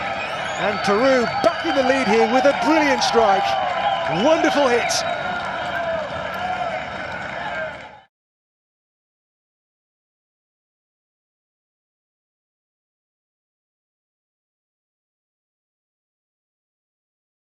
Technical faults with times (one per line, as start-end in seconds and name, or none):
none